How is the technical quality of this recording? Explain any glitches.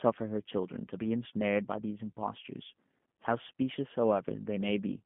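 The technical quality is limited by one fault throughout. From start to finish the speech sounds thin, slightly rough and synthetic, confined to 150 Hz to 3.4 kHz: G.729 codec damage, rebuilding speech from a filter, pitch predictor and sparse pulses, fitting an 8 kbit/s stream.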